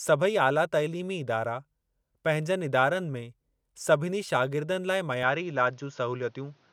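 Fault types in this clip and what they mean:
Input switched to a poorer device: the recording's input was likely moved to a narrower-band microphone at 5.23 s, so from then on nothing reaches above 6.8 kHz, the speech sounds duller, and a faint new background noise appears, with no gap at the change.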